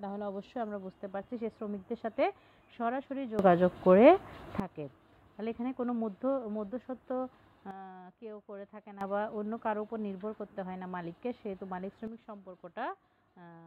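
The audio has three sudden gain jumps, with sound and noise floor changing level together: up about 15 dB at 3.39–4.60 s, down about 11 dB at 7.71–9.01 s, and down about 9 dB from 12.07 s to the end, likely from gain changes applied without a ramp.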